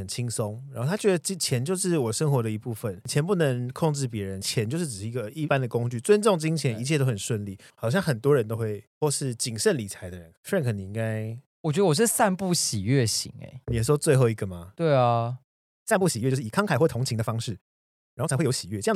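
From 15.62 s to the end, a time-stretched section runs 1.51 times faster but keeps its pitch, sounding rushed, likely from dropped short pieces.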